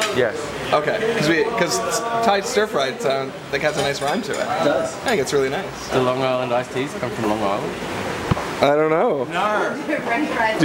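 Nothing goes wrong anywhere in the recording, so there's no fault to point to at any moment.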